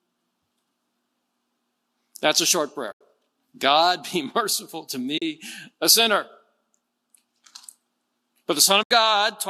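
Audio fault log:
2.92–3.01 s, 5.18–5.22 s, 8.83–8.91 s: AAC frame loss with muting. Three short soft-edged dropouts: about 90 ms right after "a short", 40 ms between "merciful to" and "a sinner", and 80 ms near the end. The decoder zeroed the missing frames, and the overlapping windows fade the sound down and back up, so you get gentle holes. The hole lengths fit short frames of around 10 ms, likely from the low-delay AAC stream.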